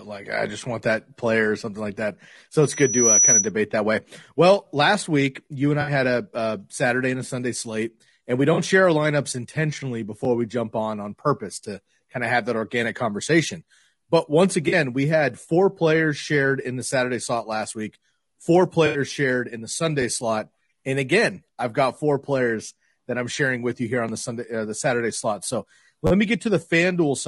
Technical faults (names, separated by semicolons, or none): low-delay AAC compression; loudspeaker feedback squeal; AAC frame loss with concealment; repeated buffer